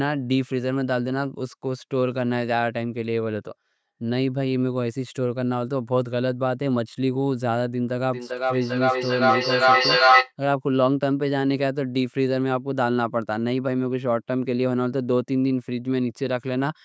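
From 8.13 s to 10.34 s there is feedback echo between two devices. Two devices on the same call share one room. One plays back what the other's microphone sent, and that microphone hears it again. Each canceller removes only its own playback, so the loop keeps running. The speech returns about every 0.4 seconds, thinner and more ringing each time. The repeats build instead of fading, peaking about 7 dB above the speech. The band-limited call sound, with nothing above 8 kHz, is normal.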